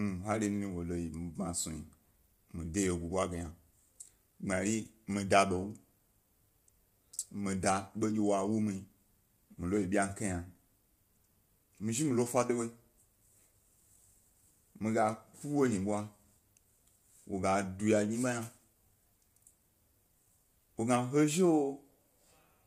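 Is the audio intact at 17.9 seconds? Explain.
No. At 17.9 s the speech carries low-delay AAC compression that runs through the whole clip, likely AAC-ELD at a rate around 32 kbps. Its short frames blur the pitch harmonics, so the voice sounds rough and grainy. A spectrogram shows smeared harmonics, noise filling the gaps between them, and nothing above 15.6 kHz.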